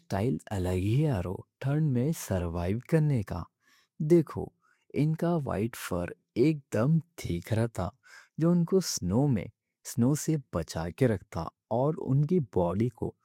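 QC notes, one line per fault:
Nothing stood out on listening.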